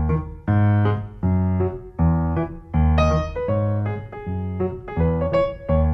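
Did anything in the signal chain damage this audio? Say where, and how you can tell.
No, none of the stages in the chain left any damage that can be heard in this audio.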